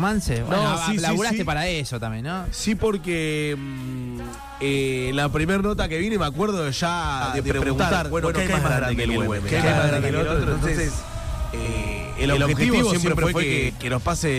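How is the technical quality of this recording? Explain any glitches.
The recording has one clear fault. From 7.21 to 13.69 s there is a doubled audio track. A second copy trails about a tenth of a second behind, at roughly equal level, likely from a slower duplicate capture path. It sounds like a hard, dry slapback echo that starts and stops abruptly.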